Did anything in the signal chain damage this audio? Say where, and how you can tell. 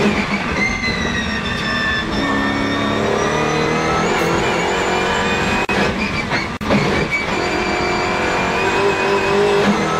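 Yes, at the codec stage: AAC frame loss with concealment, at 0.73 to 0.84 s and 5.28 to 5.34 s. The decoder patched each gap from the last good spectrum, so you get a short smeared, noisy or phasey stretch. Lengths fit two lost frames, then one.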